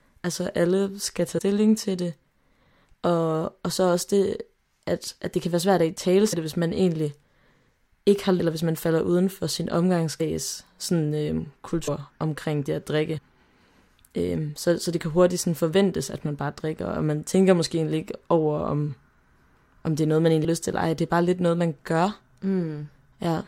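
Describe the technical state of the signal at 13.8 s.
At 13.8 s the speech signal is intact, with no audible technical fault at that moment.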